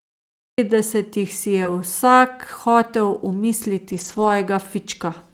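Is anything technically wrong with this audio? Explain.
Yes, there are three kinds of fault.

From 0 to 0.58 s there is only digital silence, and then the audio starts abruptly in the middle of a sound, with no natural attack. This is a cut-off start: the recording or stream began after the sound was already under way.

Around 1.63 to 1.66 s there is a brief smear where the sound seems to carry on past itself for a moment. This is short concealed packet loss. About 20 ms never arrived in time, and the decoder bridged roughly the first 11 ms by extending the preceding sound before rejoining the real signal.

At 1.64 to 1.66 s, overlapping that smear, a 20 ms stretch turns rougher and grainier. This is a lost packet rebuilt from error correction, which fits one lost packet. The following packet carried a low-bitrate copy of it, and the decoder played that copy instead of leaving a gap.

Between 3.92 and 4.30 s the speech sounds coarse and noisy in patches totalling about 200 ms. 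This is the same kind of fault, a lost packet rebuilt from error correction, and it fits roughly ten lost packets, each replaced by its lower-quality backup copy.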